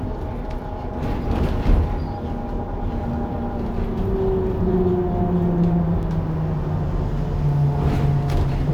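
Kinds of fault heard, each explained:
Doubled audio track: from 4.47 to 6.03 s the sounds are heard twice, a full-band copy about half a second behind and roughly 5 dB quieter, likely from a second capture path. The waveform shows repeated shapes, and the spectrogram shows events duplicated, starting and stopping abruptly.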